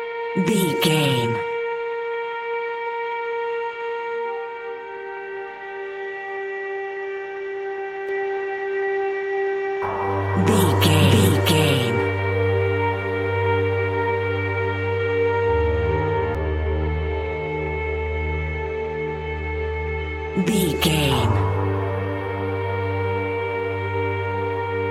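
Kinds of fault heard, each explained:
Doubled audio track: likely a second, slower capture path or an out-of-step edit mixing the sound in twice. From 8.09 to 16.35 s a full-band copy trails about 0.7 s behind at roughly equal level, with no decay or room colour, starting and stopping abruptly.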